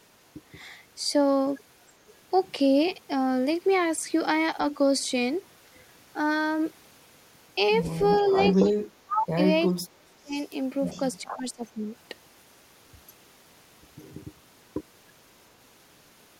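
At 2.08 to 2.14 s and 4.72 to 4.78 s, short scraps of echo leak appear. A copy of the speech returns 396 ms late, about 35 dB below the speech at first, then about 15 dB below. A far-end echo canceller likely let loudspeaker pickup through. Longer echo follows at 8.18 to 8.7 s and 10.35 to 11.01 s, well below the speech.

From 8.3 to 10.32 s, the speech is suppressed in double talk. For about a second in pieces it dips by up to about 35 dB. At 11.23 to 11.88 s it drops again, up to about 25 dB, for about half a second. The canceller likely ducked both talkers at once.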